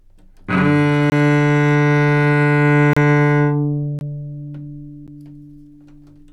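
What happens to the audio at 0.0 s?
Nothing goes wrong at 0.0 s: the audio starts cleanly and is intact at that moment.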